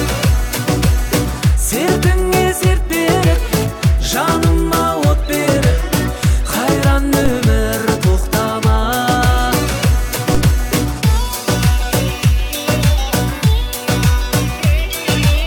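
Two DC steps interrupt the audio, at 7.26 s and again at 10.35 s, each heard as a brief low thump while the sound carries on unchanged. At each moment the waveform's zero line jumps abruptly by about -6 dBFS, then sags back toward centre as a roughly 5 Hz high-pass drains the offset away. On a spectrogram every step appears as a thin vertical stripe of energy reaching down into the lowest bins.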